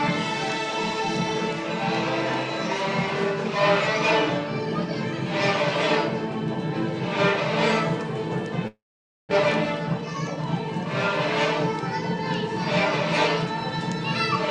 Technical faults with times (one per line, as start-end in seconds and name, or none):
8.67-9.33 long network dropout
9.99-10.37 jitter buffer speed-up